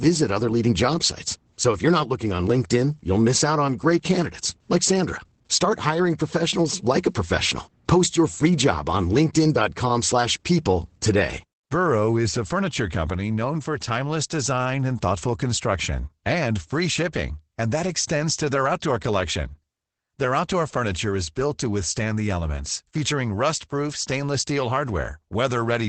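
Opus voice compression runs through the whole speech clip, and its coding damage is plainly audible. The SILK linear-prediction coder, working in wideband mode, leaves nothing above 8.6 kHz and renders the excitation coarsely, which fits a low bitrate around 12 kbps.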